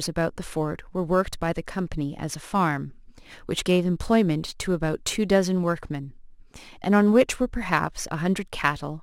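From start to finish the speech carries crude rate conversion. Samples were simply dropped to the nearest position, which fits a change from 48 kHz to 44.1 kHz, leaving a gritty, inharmonic fizz roughly 30 dB below the speech. Unlike steady hiss, it rises and falls with loud and bright sounds.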